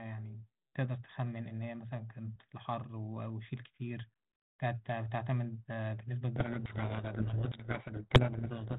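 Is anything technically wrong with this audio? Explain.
Yes. From 6.36 s to the end of the clip the speech is buried in harsh, grinding distortion, a codec payload misread. The sender and decoder disagree on the bit order within each G.726 code word, so every difference value is decoded wrongly and the adaptive predictor wanders. The light band-limited coloration of the 32 kbit/s G.726 path before this point gives way to noise. On a spectrogram, dense broadband hash fills everything below 4 kHz and blurs the speech structure. The waveform turns into a rough, noisy mass that only loosely tracks the speech level.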